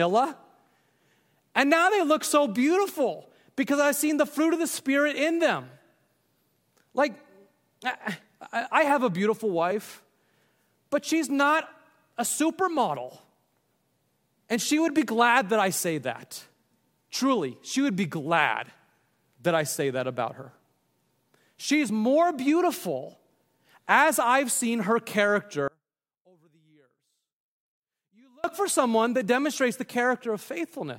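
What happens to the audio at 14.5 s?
Nothing goes wrong at 14.5 s; the audio is intact through that moment with no dropout, click, glitch or other fault.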